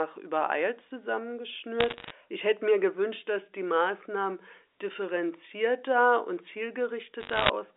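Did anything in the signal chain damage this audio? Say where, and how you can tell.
Yes. The damage is on the digital transmission link: bit errors on a digital phone line, in two bursts from 1.80 to 2.10 s and from 7.20 to 7.49 s. Each burst is a patch of sharp ticks and crackle laid over speech that otherwise carries through unchanged. The error rate is a little under one percent in the first burst and about one percent in the second. Flipped bits in the G.711 A-law stream corrupt single samples. A hit on a high-order bit, or on the sign bit of a loud sample, throws that sample far from its true value, which produces a click.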